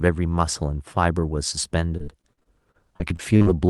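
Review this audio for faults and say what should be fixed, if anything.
Repeated packet loss (robotic sound) runs from 1.97 s to 3.48 s. Over that 1.5 s stretch there are 13 gaps, the longest about 42 ms. Each gap is filled by extending the preceding audio, and about a quarter of the span ends up concealed. The result is choppy speech with pieces missing. The call path underneath, whose bandwidth ends around 12 kHz and points to Opus at a modest bitrate, carries the gaps without masking them. To prevent this, stabilise the network link and give the jitter buffer enough depth, or enable Opus in-band FEC, so that consecutive losses are recovered rather than concealed.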